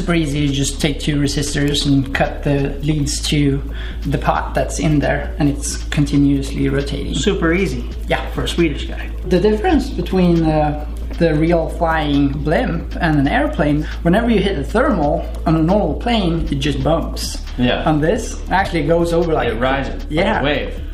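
At 18.64 s the audio skips ahead and a brief glitch, about 30 ms long, replaces the sound. This is likely a broken MP3 bit reservoir: after frames were lost, the next frame, roughly one 26 ms frame long, drew its borrowed data from the wrong bytes.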